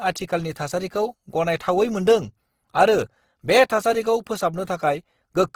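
Throughout, the speech sounds grainy and rough: likely Opus compression in music mode, noise-filling starved bands at a rate that fits about 16 kbps.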